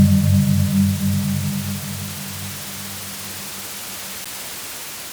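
At 4.24 s there is a CD skip: a jolt or disc flaw knocks the laser onto a different turn of the spiral, so playback briefly mutes, for around 10 ms, with a tick, then resumes elsewhere. Unlike a plain dropout, the sound after the gap doesn't continue where it left off.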